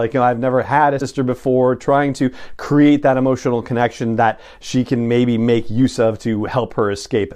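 A speech clip with one case of compressed frames skipped. At 0.98 to 1.02 s, right after "I've never had a" and before "before trying to create", the audio jumps forward. About a tenth of a second of sound is gone. Whole coded frames were not played, either missing from the file or rejected by the decoder as damaged.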